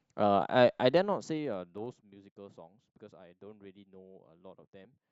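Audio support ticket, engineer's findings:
Zipper noise, 0.85 to 2.12 s on the speech: ticking during a fade down of roughly 25 dB. Unsmoothed gain moving in 2 dB steps, about 15 per second, each step clicking.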